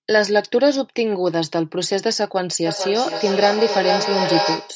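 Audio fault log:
2.66–4.75 s, feedback echo between two devices: From here to the end, the speech comes back around roughly every 400 ms, each pass thinner and more ringing. Two devices in the same room are on the call, so one plays out what the other's mic sent and that mic hears it again. Neither echo canceller catches the other's playback. The repeats reach about -2 dB against the speech, so they pile up rather than fading.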